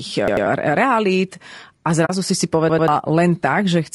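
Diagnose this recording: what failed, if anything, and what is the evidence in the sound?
The speech sounds rough and grainy for the whole clip, with noise filling the gaps between harmonics and a thin, synthetic upper band. This is codec damage, likely from low-delay AAC compression at a bitrate around 32 kbps: short frames resolve pitch poorly.

At 0.28 to 0.46 s and again at 2.69 to 2.88 s, a short piece of speech stutters, sounding three times with hard joins. This is a repeated buffer at the driver or buffer stage. New audio arrived late, so a roughly 93 ms block, which fits a 4096-sample buffer, replayed twice. About a fifth of a second of real audio was lost each time.

From 2.05 to 2.10 s, the speech fades into a brief, soft-edged hole of about 40 ms. This is AAC frame loss with muting at the network or codec stage. The decoder zeroed two lost frames, and overlapping windows smoothed the edges.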